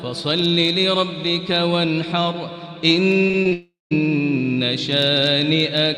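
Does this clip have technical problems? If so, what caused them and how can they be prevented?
Yes. From 3.27 to 3.53 s there is repeated packet loss, heard as a robotic, choppy sound. Four short gaps, the longest about 21 ms, were patched by repeating the last sound. Roughly 29% of that span is filled in. A steadier connection with a larger jitter buffer would prevent this.

From 3.53 to 3.93 s the sound stops, most likely from a long network dropout. About 0.38 s never arrives. The last sound is stretched into a fading buzz, then about 0.18 s of silence follows before the audio returns. A more reliable network link would prevent it.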